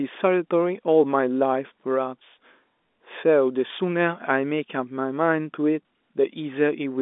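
Speech over a telephone line, band-limited to roughly 250 Hz to 3.6 kHz as heard through G.711 A-law coding. At 3.68 s there is packet loss with the last packet repeated: one 20 ms packet went missing, and the receiver filled the gap by replaying the packet before it. The single repeat gives a small blip. On a waveform the 20 ms segment appears twice in a row with a step at each seam. On a spectrogram the slice looks duplicated, with a thin vertical broadband line at each splice.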